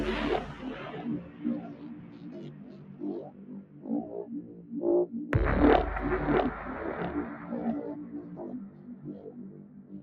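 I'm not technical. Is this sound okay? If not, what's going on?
No. A noise suppressor applied to music or sounds runs through the whole clip. A filter built for speech treats steady tones and lingering tails as noise and turns them down, so the sound keeps pumping and thinning as the level swings up and down.

Sound cut by the noise suppressor happens at 1.23 to 1.43, 1.66 to 2.33, 2.53 to 3.01, 3.3 to 3.85, 4.42 to 4.71, 8.69 to 9.04 and 9.5 to 9.92 seconds. In each stretch, held or fading sound sinks while sharp starts still come through.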